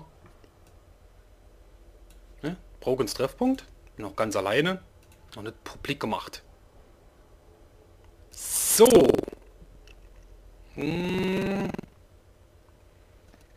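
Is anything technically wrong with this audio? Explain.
Yes. Buffer tearing runs from 8.82 s to the end. Writer and reader have slipped, so part of each buffer replays older audio, making a steady 21.5 Hz rattle that fits a 2048-sample buffer.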